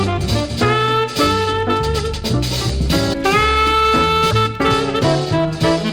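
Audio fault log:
3.12–3.15 s and 4.30–4.33 s, broken MP3 bit reservoir: the audio skips forward through a one-frame garbled spot, likely a lost frame starving its successor of borrowed bits.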